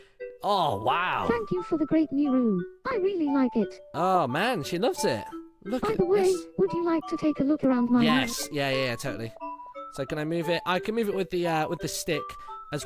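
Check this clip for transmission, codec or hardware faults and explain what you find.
No transmission, codec or hardware faults turn up anywhere in the signal.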